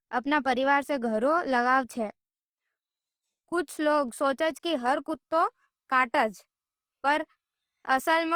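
Across the whole speech recording there is plainly audible Opus compression damage, likely from an encode at a low bitrate, which fits roughly 24 kbps in the codec's music (CELT) mode. The encoder keeps each band's energy but, starved of bits, fills detail with folded or noise-like content, so tones turn rough and grainy. Unlike MP3, it leaves few spectral holes, so there is less swirling or watery sound, and the bandwidth stays full, reaching about 20.2 kHz.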